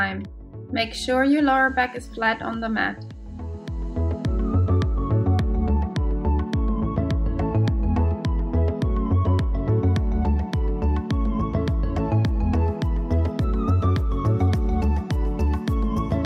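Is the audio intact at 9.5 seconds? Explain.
Yes, the audio at 9.5 s is intact, with no dropout, click, distortion or other fault at that moment.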